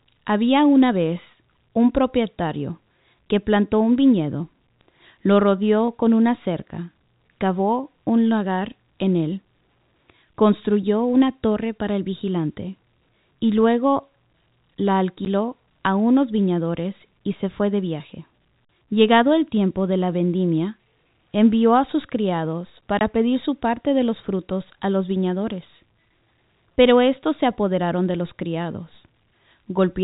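Packet loss filled with silence leaves hard-edged gaps at 15.25 s (10 ms) and 22.99 to 23.01 s (20 ms), fitting one and two lost 10 ms packets.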